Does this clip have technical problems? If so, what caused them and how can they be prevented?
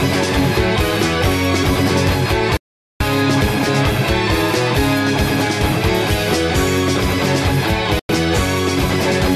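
Yes. Digital broadcast dropouts mute the sound at 2.57–3.01 s (0.43 s) and 7.99–8.10 s (0.1 s). The receiver stopped getting good frames and faded to silence in about 3 ms. Concealment would instead fill the gaps with smeared sound. Stronger reception, such as a better-placed antenna, prevents it.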